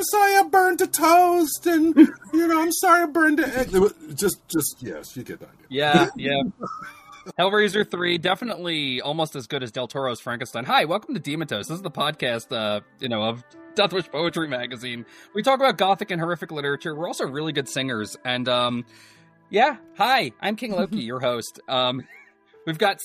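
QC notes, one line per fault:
7.72–8.54 s, overlap-add ripple: frames were windowed and rejoined with an overlap whose windows fail to sum to a constant gain, so the level swells and dips by about 6 dB once per frame, around fifty times a second, heard as a rough, robotic flutter over the sound.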